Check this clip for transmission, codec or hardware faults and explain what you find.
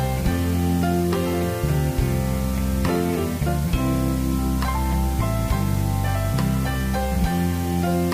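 One fault is present, running through the whole clip. Low bit depth with dither: the audio was held to about 5 bits and dithered before rounding. The rounding error becomes a steady, even hiss, roughly 15 dB below the signal, with no distortion.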